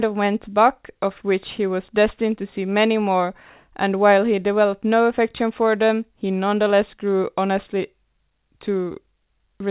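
No technical faults can be heard in this speech recording. It carries the narrow band of a mu-law telephone line, with nothing above 4 kHz, consistent with 8 kHz G.711 telephone coding, and a faint noise floor that rises and falls with the level of the sound.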